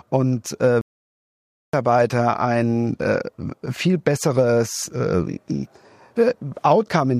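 At 0.81 s the player likely ran short of buffered data or had its output thread held up, causing a playback stall. The speech cuts off mid-flow and silence holds for 0.92 s, until 1.73 s, when the sound picks up again.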